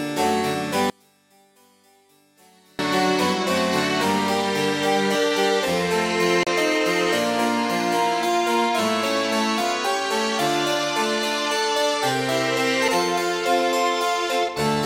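From 0.90 to 2.79 s the sound drops by about 34 dB. The likely cause is one channel inverted. With one stereo side's polarity reversed, the shared content cancels when the channels are summed to mono, leaving only their faint difference.

At 6.43 to 6.47 s there is a CD skip. Playback mutes for roughly 40 ms and resumes at a different point. At 12.88 s a second, much shorter skip follows, with a mute of only a few milliseconds. Both times the laser jumped tracks on the spiral.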